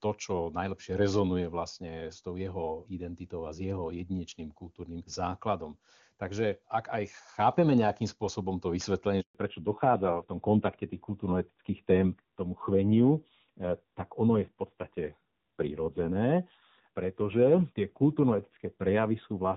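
At 9.21 s the speech cuts out abruptly, dying away within a few tens of milliseconds, and stays silent until 9.35 s, a 140 ms hole in which whatever was said is lost. This is a handover gap: the call was being passed from one network to another, and during that switch no speech frames reached the receiver, so the decoder had nothing to play until the new link began delivering audio.

From 9.35 s to the end of the clip, the speech sounds noticeably duller, boxier and rougher than before, with all content above 4 kHz gone. This is a fallback to narrowband. Up to the gap, the audio carries the open, airy top end of HD Voice, which fits AMR-WB at its highest rate, around 23.85 kbit/s, with little or no audible coding damage. After the handover the call dropped to an older narrowband codec, and the rasp points to AMR-NB at a low rate near 7.4 kbit/s.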